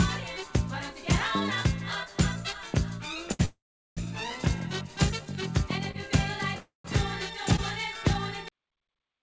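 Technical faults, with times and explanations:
3.32–3.41 s, 5.91–5.96 s and 7.56–7.60 s, short stall from a late packet: at each point a sound is held too long, by about 73 ms, 30 ms and 18 ms respectively, with a slight buzz or dip. A packet arrived after its playout time, the jitter buffer emptied, and the receiver stretched the last sound until the packet arrived, then resumed from the same place with nothing lost. On a spectrogram the harmonics run flat and smeared for that span. The waveform shows a repeated or slightly sagging cycle pattern.
3.45–3.99 s and 6.60–6.86 s, call audio freeze: the sound halts, turns into a fading buzz or hiss, then goes quiet before carrying on where it stopped. The first freeze inserts about 514 ms, roughly 400 ms of it silent. The second inserts about 243 ms, with about 150 ms silent. The likely cause is packets held up in transit, which drained the jitter buffer so that the receiver had to conceal the gap. 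A spectrogram shows a decaying smear into a blank band, with the band-limited 8 kHz ceiling of the call codec intact on either side. The waveform shows the envelope tapering to a flat line.
8.48 s, cut-off end: the audio stops mid-sound and drops straight to digital silence, with no decay. The final buffers were never written or played out. On the waveform the signal ends abruptly at full level and becomes a flat line. The spectrogram shows energy ending at a hard vertical edge, often with a brief broadband streak where the discontinuity produces a click.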